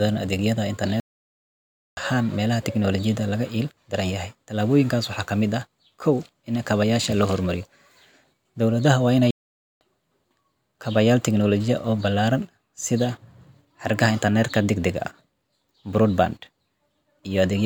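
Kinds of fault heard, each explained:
Playback stall: the speech just drops to silence mid-flow twice, for nearly a second from 1.0 to 1.97 s and about half a second from 9.31 to 9.81 s, then carries on. That's likely the player starving for data or its thread getting blocked.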